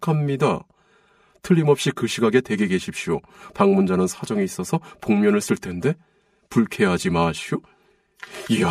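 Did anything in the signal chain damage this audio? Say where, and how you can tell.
Yes, there's channel delay (comb filtering) across the whole clip, and it points to the buffer or driver stage feeding a mono fold-down. One side of the speech arrives about 5 ms late, and when the two are summed, everything they share cancels at evenly spaced frequencies. The first notch sits around 100 Hz, with more following at regular steps up the spectrum. That fixed comb makes the speech sound hollow and phasey from start to finish.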